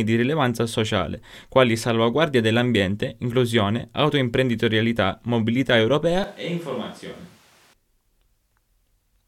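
From 6.24 s to 7.73 s, right after "dell'ambiente inclusione autoimprenditorialità mobilità", the speech abruptly turns roomy and hollow, loses its low end, and drops by about 10 dB, while background noise rises to only some 25 dB below the speech. It snaps back just as suddenly. This is a switch to a distant microphone: the close mic's signal likely dropped out, leaving a farther pickup that hears more of the room.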